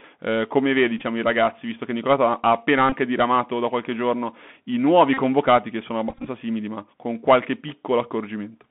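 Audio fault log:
Throughout: Bluetooth CVSD headset codec. The speech is squeezed into a narrow line band of about 150 Hz to 3.5 kHz, with plainly audible codec damage. The one-bit up/down coder's adaptive step can't keep pace with loud high sounds, so s sounds turn scratchy and a grainy hiss sits under everything.
0.98–1.03 s, 2.90–2.93 s, 5.14–5.19 s, 6.09–6.28 s: Bluetooth headset packet repeated. Lost voice packets were patched by replaying the previous packet's bits, giving short buzzy, repetitive stutters. About 23 ms goes missing at the first two, between "ha appena" and "diramato da qualche giorno" for the second. About 34 ms goes missing after "qualche giorno i nuovi", and about 98 ms spread over 180 ms between "che sono" and "simili ma con qualche".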